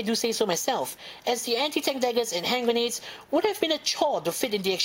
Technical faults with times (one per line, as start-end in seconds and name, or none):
0.00-4.84 block size mismatch (truncated)